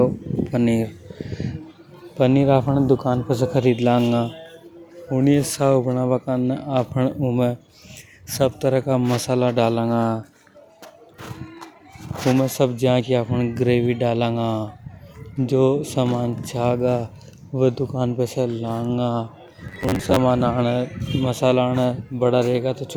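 At 19.68–20.18 s, robotic sound from repeated short buffers gives a metallic 94 Hz buzz, likely a looped 11 ms segment, seen as rigid harmonic stripes.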